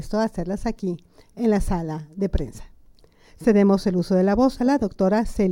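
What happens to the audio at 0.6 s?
Nothing goes wrong at 0.6 s; the audio runs on intact through that moment, with no dropout, click or distortion.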